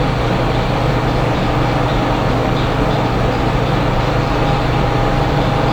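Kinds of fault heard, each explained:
No audible faults detected.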